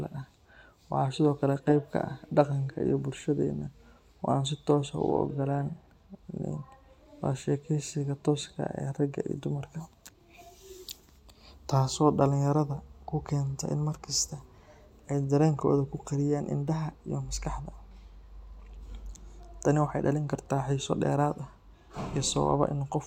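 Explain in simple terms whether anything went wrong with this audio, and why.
Nothing went wrong here; no technical problems can be heard.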